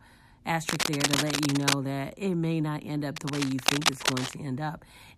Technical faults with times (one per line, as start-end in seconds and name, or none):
0.69-1.76 cable scratch noise
3.16-4.36 cable scratch noise